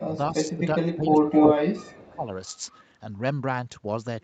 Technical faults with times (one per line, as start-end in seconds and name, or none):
0.00-2.31 speech suppressed in double talk
0.11-0.65 echo leak
1.12-2.09 echo leak